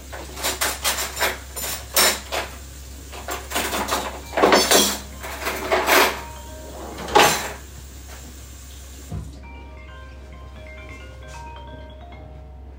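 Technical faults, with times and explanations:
No technical faults can be heard anywhere in the clip. The audio carries on without any disturbance that would need explaining.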